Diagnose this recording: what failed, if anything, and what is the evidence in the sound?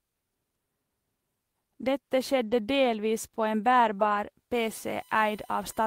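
Network stage: there's a lost packet rebuilt from error correction between 2.43 and 2.53 s. No gap, but about 60 ms turns rougher and noisier, which fits three 20 ms packets lost and replaced with the low-bitrate copies carried in the following packets.

Analogue wiring or power: USB whine comes in at 4.55 s and runs to the end, a fixed-pitch tone on a 1 kHz series, loudest at the 9 kHz harmonic and roughly 30 dB under the speech. That's the bus's 1 ms frame current leaking through power or ground.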